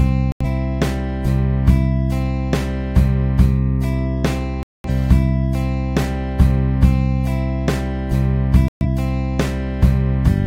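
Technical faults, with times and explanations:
0.32–0.45 s, 4.63–4.89 s and 8.68–8.86 s, digital broadcast dropout: the receiver stopped getting decodable frames, probably from lost signal or failed checksums, and muted until clean frames resumed. Each time the sound drops abruptly to silence and then returns further on. What was sent during the gap never arrives. About 85, 213 and 128 ms of programme go missing, which fits two, five and three lost frames of roughly 43 ms each.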